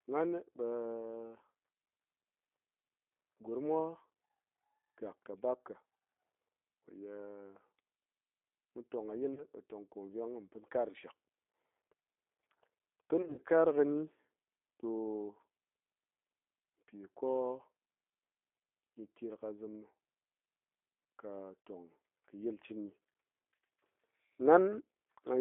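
Throughout, the G.729 codec at 8 kbit/s squeezes the speech into roughly 250 Hz to 3.6 kHz and rebuilds it from a filter and sparse pulses, giving a plainly rough, synthetic edge. On a spectrogram, everything above 3.6 kHz is empty.

VoIP packet loss concealed by the speech codec appears from 9.34 to 9.45 s, where about 30 ms of audio goes missing. It sounds like a brief buzzy or noisy smear. A worse patch follows from 13.22 to 13.41 s, where roughly 120 ms is lost across 160 ms, with the longest gap lasting 60 ms. The decoder stretches its last pitch and filter into a fading buzzy tone or coloured noise. On a spectrogram this shows as flat, repeated harmonics, and the waveform shows a decaying envelope.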